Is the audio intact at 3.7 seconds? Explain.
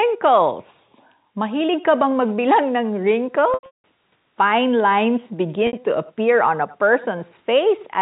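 No, 3.7 seconds falls inside a packet loss with pitch repetition running from 3.54 to 3.84 s. About 270 ms of audio went missing across those 300 ms. The receiver patched each gap by repeating the last pitch period and fading it, so you get a brief buzzy hold. The longest hole, 180 ms, fades right into silence before the sound cross-fades back in.

The echo with no canceller is also present at that moment, as it is through the whole clip. The far end's loudspeaker is leaking into its microphone, and nothing strips that out, so a thin copy trails the sound by roughly a tenth of a second, about 22 dB down.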